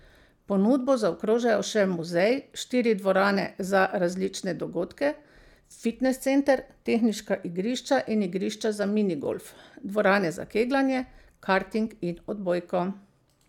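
No technical faults can be heard at any point in the recording.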